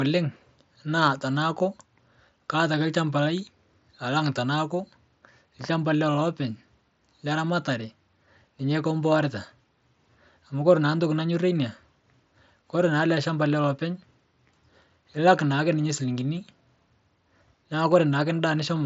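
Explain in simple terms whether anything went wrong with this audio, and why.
Nothing went wrong here: the speech arrives over a Bluetooth headset link using the mSBC headset codec, which by design carries nothing above about 7.7 kHz, so the somewhat trimmed top end is simply how that link works and not a fault.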